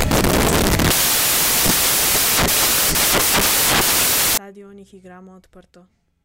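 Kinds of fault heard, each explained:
Samples built from the wrong bytes: loud, hissing white noise swamps the speech from the start to about 4.38 s. The reader assembles each sample's bytes misaligned or in swapped order, so the fast-changing low bits become the dominant part of every value.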